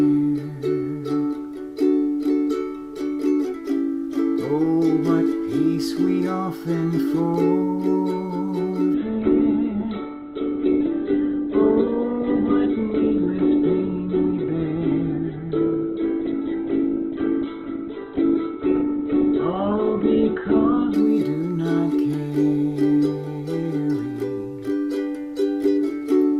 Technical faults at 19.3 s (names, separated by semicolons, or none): adaptive stream at a lower bitrate